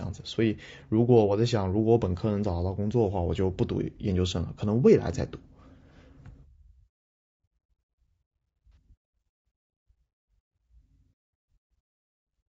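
Low-delay AAC compression runs through the whole speech clip. The speech sounds rough and grainy, with plainly audible noise filling the gaps between the pitch harmonics and a thin, somewhat synthetic top band. The likely cause is AAC-ELD coding at a low rate. The damage points to around 32 kbps. Its very short frames blur the harmonic structure of the voice, and there are too few bits left to code the upper frequencies faithfully.

AAC frame loss with concealment occurs from 8.73 to 8.77 s. Audio data went missing for about 30 ms, which fits a single lost frame. The decoder covered the gap by reusing and reshaping the spectrum of the last good frame instead of the real signal. The result is a brief smeared, noisy patch where the speech loses its clarity before normal decoding resumes.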